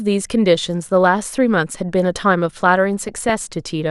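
From the start the speech is dull and gurgly, with a grainy roughness and the top end flickering in and out. This is plainly audible damage, likely from MP2 compression at a rate around 80 kbps. Too few bits were available across the 32 sub-bands, so upper bands drop out frame by frame and the remaining ones are coarsely quantised.

From 3.01 to 3.31 s, DAB burbling breaks through as a short burst of noise blips in single sub-bands over the speech. Bit errors, at a rate of roughly a fifth of a percent, slipped past error correction into the MP2 data. Corrupted samples put short blips of noise into individual sub-bands. The 0.3 s span points to about a dozen damaged frames in a row.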